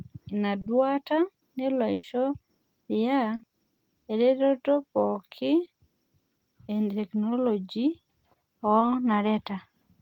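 Speech with two kinds of network dropout. Short concealed packet loss appears at 0.61 s (just before "duata nelo"), 3.35, 5.65 and 8.79 s: 20 to 40 ms gaps papered over by extending the preceding sound, heard as brief smears or wobbles rather than held tones. A burst of packet loss follows "ina duata nelo" at 1.93 to 2.05 s, where about 100 ms was lost and concealed as a held, fading buzz or hiss. Audio then resumes with a chunk skipped.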